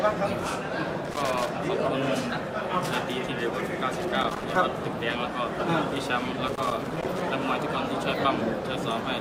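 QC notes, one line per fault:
1.05–1.49 s, 4.00–4.58 s and 6.48–7.27 s: loose connector crackle, three irregular bursts of scratchy crackle, the last and longest lasting nearly 0.8 s. A worn or dirty contact in the signal path is making and breaking as it shifts, chopping the audio on and off in rapid, uneven bursts. Any DC sitting on the line turns each make or break into a pop, which gives the bursts their rough, gritty texture.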